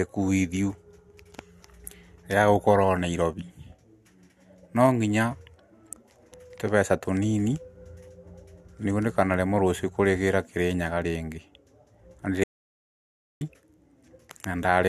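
At 12.44 s the speech cuts off abruptly in mid-flow and the clip falls into silence until 13.41 s, when the speech resumes just as abruptly. This is an audio dropout to silence lasting about 0.97 s, with no room tone or noise floor in the gap. The input was likely lost for that stretch while recording continued writing silence, so whatever was said during that second is missing.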